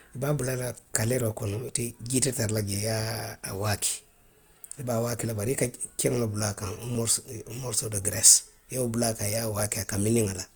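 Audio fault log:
1.69–9.6 s, clock drift buffer slips: about four clicks land every 2.64 s while the speech runs. The likely cause is two clocks a few hundred ppm apart, so the buffer periodically drops or repeats a few dozen samples at once.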